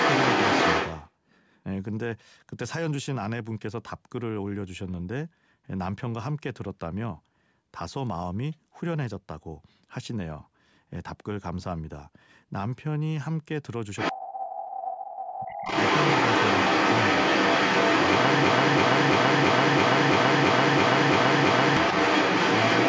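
From 0.0 to 1.1 s, and again at 13.97 to 14.13 s, the other side's voice is leaking through, somewhat louder than the talker. This is likely loudspeaker echo that the canceller failed to remove.

Speech suppressed in double talk follows at 14.12 to 14.46 s and 14.73 to 15.54 s. The talker's level sinks by around 30 dB, likely because the canceller turned down both sides while they overlapped. That deep dip coinciding with the far voice sets it apart from a plain dropout.

Between those two dips, at 14.41 to 14.76 s, the leak sits a little below the speech. From 15.45 s to the end it returns somewhat louder than the speech.

From 18.44 to 21.77 s, a broken-record loop replays one 334 ms fragment ten times, back to back. This is likely a stalled stream resending its last buffer. The repeats are identical, whereas echo would be a delayed, altered copy, and the audio due in that stretch is lost.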